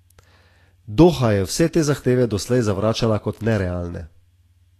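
Throughout the speech the treble sounds hissy and grainy, with a roughened, smeared edge on consonant onsets, and nothing at all above 14.1 kHz. This is likely Vorbis compression at a low setting, in a range that fits roughly 36 kbps. The coder has cut the top band away and quantised the remaining high frequencies so coarsely that their fine detail turns into noise of similar energy, which produces the grainy hiss and blurred attacks.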